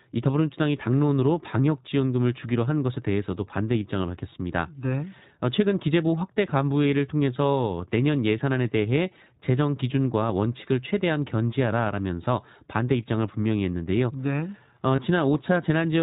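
Throughout the speech, the iLBC codec narrows the band: a spectrogram shows nothing above 4 kHz, and the voice has a plainly audible rough, synthetic edge. Each short frame's excitation is coded on its own, consistent with the 15.2 kbps, 20 ms frame mode.

From 14.96 to 14.99 s, lost iLBC frames, most likely a single dropped 20 ms packet, leave the decoder repeating the last pitch cycle with added noise. It is heard as a brief held, buzzy vowel, with regular repeated periods in the waveform, before the normal voice resumes almost at once.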